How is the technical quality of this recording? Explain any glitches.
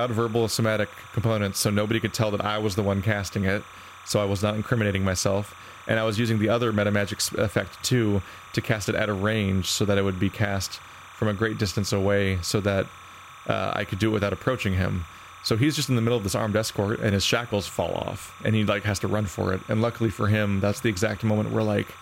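The main problem is timecode bleed running the whole way through. Linear timecode at 29.97 frames per second has leaked in, leaving a chirpy warble near 1 and 2 kHz, roughly 20 dB under the speech.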